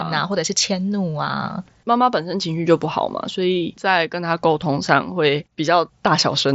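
Nothing goes wrong anywhere in this speech; it simply carries the sound of a Bluetooth mSBC headset link, with the top end stopping at about 7.7 kHz and a light graininess that belongs to that codec.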